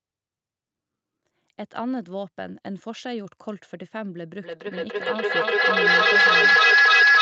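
At 4.43 s a feedback howl begins and runs to the end of the clip. Two devices in the same room are on the call. The loop from loudspeaker back into microphone gains level on each pass. The repeats build, coming round roughly every 0.3 s, and narrow to a tone around 1.5 kHz. At its peak the howl sits about 15 dB above the speech. Nothing breaks the loop before the clip ends.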